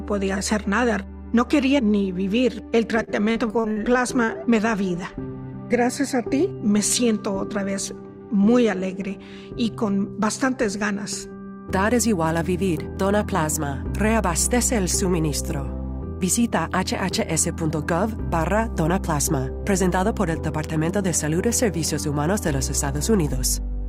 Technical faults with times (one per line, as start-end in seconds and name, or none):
3.03-3.79 repeated packet loss (robotic sound)
4.24-4.31 short concealed packet loss